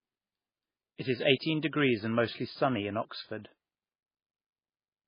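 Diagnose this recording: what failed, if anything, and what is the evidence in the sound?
Throughout, the speech sounds watery and dull with nothing above 5.1 kHz, likely MP3 compression: a bit-starved codec cutting treble and flickering weak bands, fitting about 16 kbps.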